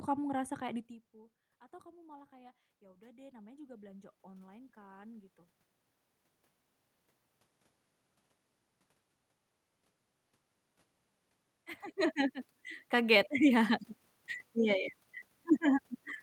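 Around 1 s the talker drops back from the mic. From 1.82 to 5.38 s you get automatic gain rising: the AGC sees the input fall by about 20 dB and slowly pushes its gain up about 8 dB, so voice and room noise swell together.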